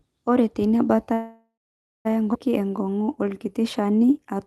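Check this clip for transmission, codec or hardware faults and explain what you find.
The clip has three transmission faults, all from the call's packet delivery and jitter buffer.

From 1.13 to 2.07 s there is a call audio freeze. The last sound is drawn out as a fading buzz that drops to silence for about 0.55 s. Then the audio resumes exactly where it left off, with nothing missing. The likely cause is packets held up in transit, so the jitter buffer ran empty and the receiver filled about 0.92 s.

Between 2.33 and 2.36 s playback skips ahead. There is an abrupt jump with almost no gap, and roughly 0.7 s of audio is missing. That stretch was dropped, either in transit or by the jitter buffer overflowing, while later audio was already waiting, so the two sides are spliced almost directly.

From 2.59 to 4.35 s a jitter buffer slow-down makes the audio run at about 90% speed with unchanged pitch. 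Sounds are stretched. The buffer repeated single pitch periods many times to rebuild its reserve, adding 184 ms in total.

Throughout, the audio carries the usual coding noise of the Opus call path, with the top end cut off at 12 kHz.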